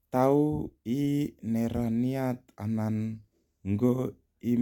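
Nothing in the recording stands out as a technical fault, so there's no problem to point to in this bit of speech.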